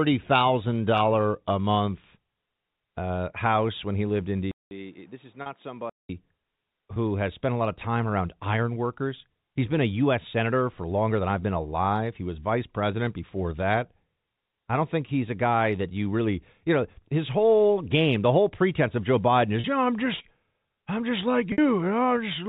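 Input switched to a poorer device, 4.51 to 6.09 s: after a gap of about 0.2 s the sound turns dull and boxy, with nothing above 3.8 kHz, a level drop of about 10 dB, and new background noise roughly 35 dB down. This is likely a change of input device mid-recording.

Packet loss with pitch repetition, at 5.42 s, 19.60 s and 21.52 s: 40, 40 and 60 ms of audio went missing. Each gap was bridged by repeating the last pitch period. The two 40 ms losses come through as a short held, buzzy tone, while the 60 ms one fades into silence before the speech returns with a short cross-fade. The first one falls inside the switched stretch.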